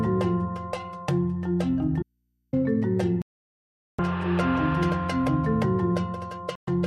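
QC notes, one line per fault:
2.03–2.53 s, audio dropout to a faint residue: signal cuts abruptly for 0.5 s, leaving only hum about 50 dB down, likely a break upstream of a live input.
3.22–3.99 s and 6.55–6.68 s, digital broadcast dropout: sound mutes to silence for 0.77 s, then 0.12 s, as the receiver discards failed frames until clean ones return.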